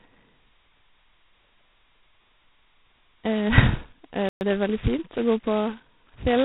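Throughout, the speech carries G.726 ADPCM damage. Nothing above 4 kHz passes. A harsh, rasping hiss rises and falls with the speech level. That fits 16 kbit/s, where each sample keeps only two bits of prediction error. The damage is heavy.

At 4.29 s a playback stall cuts the sound off mid-flow. Silence lasts 120 ms, until 4.41 s. The player likely ran short of data, or its thread was blocked. Output resumes once it recovers.

From 4.41 s to 4.53 s there is time-compressed catch-up. The player clears its backlog by dropping small pieces and cross-fading the rest. The speech runs at twice normal speed. The pitch stays the same.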